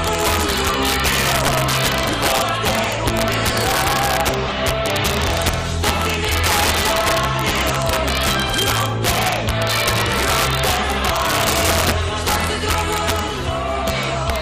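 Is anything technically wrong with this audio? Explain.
Yes. Throughout, loud peaks break into violent cracks, far sharper than clipping: integer overflow, where about 5 dB of overdrive wraps a small fraction of samples to the opposite sign.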